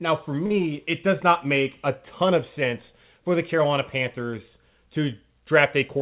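A short stall from a late packet hits this speech at 0.46 to 0.52 s. The jitter buffer ran empty, so the receiver stretched the last sound by 43 ms until the packet arrived. Nothing is lost, but that sound lingers with a slight buzz or dip, and everything after runs 43 ms late.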